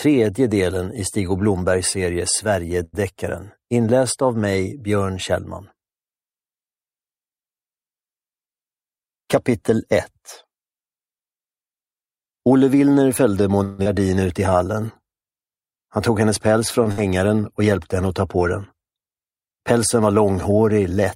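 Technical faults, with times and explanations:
2.83–2.95 s, short stall from a late packet: the last sound is held for about 98 ms with nothing lost, because the jitter buffer ran dry and the receiver stretched it until the packet came. On a spectrogram the harmonics run flat and unchanging, with a slight level dip in the waveform.
8.53–10.19 s, jitter buffer speed-up: audio runs about 6% fast at unchanged pitch, as roughly a tenth of a second of pitch periods is cut out to shrink an overfull buffer. The spectrogram shows compressed timing, and the waveform shows periodic splices.
13.64–13.87 s, long network dropout: the sound turns into a fading continuation lasting about 218 ms, then resumes with about 120 ms skipped. This is likely an interruption in delivery, bridged by concealment, and it adds about 50 ms of delay. The spectrogram shows smeared, decaying harmonics.
14.50–15.45 s, jitter buffer slow-down: audio plays at about 91% speed, same pitch, with 94 ms added by repeating pitch periods to rebuild the buffer's reserve. 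Sounds are drawn out. The spectrogram shows stretched features, and the waveform shows repeated identical cycles.
15.89–16.47 s, jitter buffer speed-up: about 7% faster at the same pitch, trimming roughly 50 ms of backlog by removing pitch periods. Sound feels briefly hurried. The spectrogram shows slightly squeezed events, and the waveform shows small discontinuities at the cut points.
16.84–16.88 s, short stall from a late packet: an 18 ms hold with nothing missing, while the receiver waits on a late packet. It shows as a brief flat patch in the spectrogram's harmonics.
16.92–16.99 s, burst of packet loss: about 60 ms of audio is gone, covered by a 58 ms continuation of the last sound that fades before playback jumps ahead. The waveform shows a decaying envelope, and the spectrogram shows frozen harmonics ending in a discontinuity.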